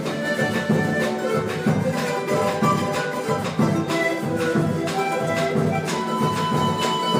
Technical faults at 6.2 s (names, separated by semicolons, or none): none